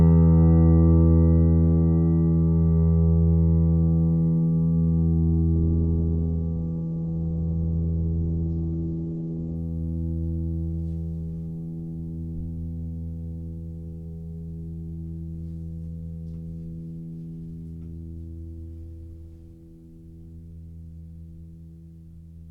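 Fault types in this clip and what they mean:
Adaptive stream at a lower bitrate: the connection slowed, so the player switched to a cheaper version of the stream for about 4 seconds, from 5.55 s to 9.55 s. The music loses its top end abruptly, with nothing above 8.2 kHz, and coding artefacts thicken, which fits a drop from roughly 64 to 16 kbit/s Opus. Quality snaps down and back without any gap in playback.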